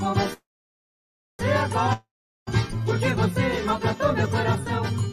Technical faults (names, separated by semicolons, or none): call audio freeze; long network dropout